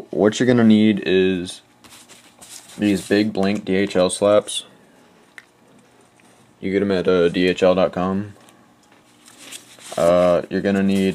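Listening through the audio, nothing stood out as a technical problem at any point.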